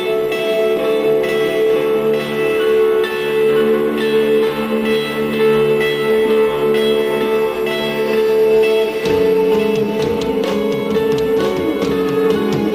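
From start to finish there's a doubled audio track: a second, full-band copy of the whole sound trails the original by roughly a second, at about the same level. It doesn't decay or pick up any room colour like an echo would, so it sounds like two identical takes running out of step. That likely comes from the signal being captured twice, once through a slower path, and both ending up in the mix.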